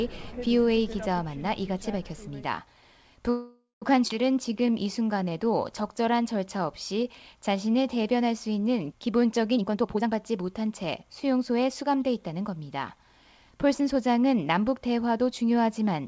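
Audio carried over a call path, band-limited with nothing above 8 kHz, which fits a G.722 codec at around 64 kbps, shows four timing faults from its jitter buffer. From 3.30 s to 3.84 s there is a call audio freeze. The last sound is stretched into a decaying buzz or hiss that covers about 0.52 s, and the final 0.16 s of that goes silent before playback resumes exactly where it stopped, so nothing is lost. The likely cause is delayed packets draining the jitter buffer, which forces the receiver to conceal the wait with extrapolated audio and adds roughly half a second of delay. Shortly after, at 4.08 s to 4.11 s, a skip ahead occurs. Playback jumps forward across a short 18 ms join, and roughly 0.3 s of material is missing, which pulls the accumulated delay back down by about that much. This is consistent with the receiver discarding audio, in transit or through buffer overflow, while later packets were already queued. 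From 4.34 s to 7.99 s a jitter buffer slow-down runs the audio at 93% speed with pitch unchanged, so sounds are drawn out. The receiver is repeating pitch periods or pause fragments to rebuild its reserve, adding 268 ms over that span. From 9.57 s to 12.41 s the opposite happens in a jitter buffer speed-up. Playback runs at 118%, well past the point where it sounds hurried, as short pitch-period chunks are cut repeatedly to shed excess buffered audio, removing roughly half a second in total.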